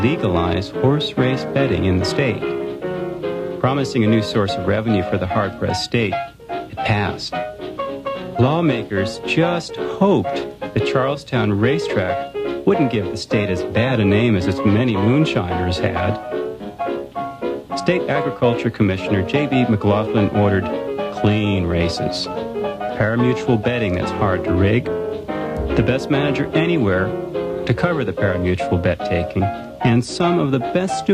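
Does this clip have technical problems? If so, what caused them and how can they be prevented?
No, there are no technical faults.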